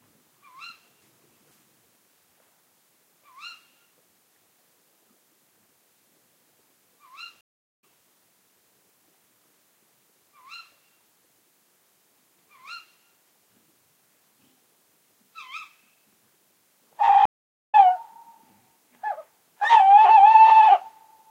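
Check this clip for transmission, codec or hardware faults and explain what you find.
There are two stream reconnect faults. At 7.41 s and 17.25 s the connection drops, leaving silences of 0.42 s and 0.48 s. A fresh decoder resumes later, skipping roughly 0.4 s and half a second of sound.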